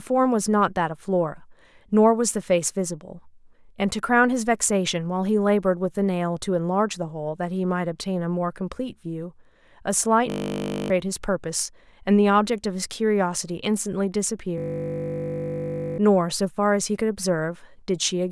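At 10.3–10.9 s and 14.58–15.98 s, a system hang loop repeats one 20 ms fragment, a steady 50 Hz buzz rather than silent dropout.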